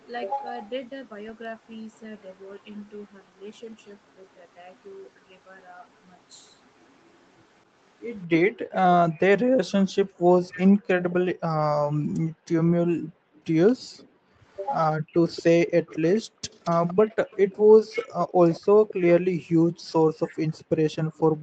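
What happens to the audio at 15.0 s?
The speech is briefly suppressed in double talk from 14.97 to 15.06 s. It drops by around 40 dB, probably because an echo canceller, unable to separate the two talkers, turned both down. An echo leak also runs from 13.97 s to the end. A faint copy of the speech trails 225 ms behind, around 20 dB quieter, likely from a loudspeaker echo that the canceller missed.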